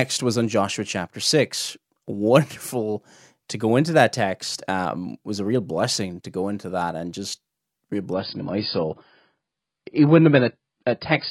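From 8.13 s, right after "that and just real", the speech abruptly turns dull and watery, with nothing above 5.1 kHz, and stays so to the end without a gap. This is an adaptive stream at a lower bitrate: a slowed connection forced a leaner encoding, which fits AAC dropping from 96 to 16 kbit/s.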